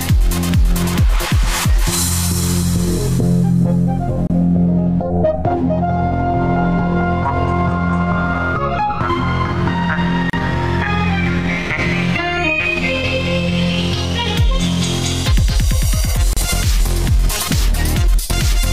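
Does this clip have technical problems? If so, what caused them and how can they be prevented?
Yes. The audio was encoded as separate pieces about 6 s long and joined without trimming the encoder delay at the start of each piece or the padding in its last frame. The result is a gap at a join of encoded pieces: short silences cut into continuous sound at 4.27 to 4.30 s (about 27 ms), 10.30 to 10.33 s and 16.33 to 16.37 s (about 34 ms each). Each has smeared edges, and the sound resumes exactly where it stopped. To prevent it, encode the material as one continuous stream, or use gapless metadata so delay and padding are trimmed at every join.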